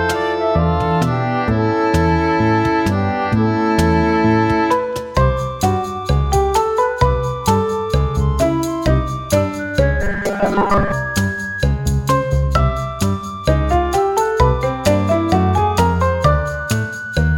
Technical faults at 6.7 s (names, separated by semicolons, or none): none